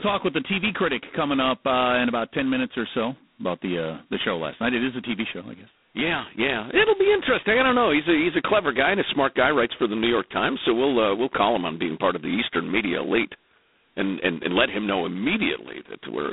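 From start to finish the speech carries G.726 ADPCM damage at 16 kbit/s, the codec's lowest rate. Each sample is reduced to a 2-bit difference from an adaptive prediction, so the quantisation noise is heavy and rides on the signal, swelling with louder syllables into a harsh, rasping hiss. The band is narrowed to roughly 250 Hz to 3.7 kHz, with nothing above 3.9 kHz, leaving a thin telephone sound.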